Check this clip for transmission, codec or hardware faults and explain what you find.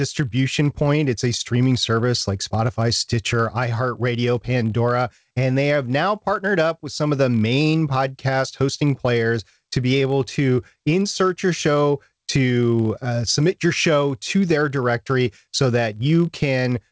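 Three faults run through this speech clip, which comes through a G.722 call path at 64 kbps with nothing above 8 kHz.

Block size mismatch (padded), throughout: a steady 43.1 Hz buzz sits under the speech, and the pace is barely slower, at 0.999 times normal speed with unchanged pitch. One stage delivers blocks shorter than the next stage reads, and each shortfall is filled with silence. The buzz rate fits a 1024-sample read block.

Clock drift between sender and receiver, throughout: the timing feels faintly unsteady rather than broken. The sender's clock runs around 5 percent fast, so the receiver's jitter buffer keeps overfilling and the receiver must keep trimming audio to stay in step.

Repeated timing corrections, from 0.20 s to 16.78 s: slight hiccups and a wavering tempo recur at uneven intervals. These are the receiver's small cuts, always in the same direction, compensating for a sender running at 105 percent speed.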